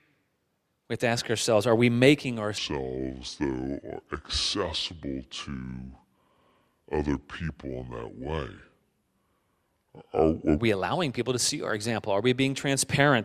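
Wrong sample rate from 2.58 to 10.59 s, just after "ourselves are we making": the speech is played back too slowly, at two-thirds speed, and its pitch drops about 7 semitones, which fits audio recorded at 48 kHz being played back at 32 kHz without conversion.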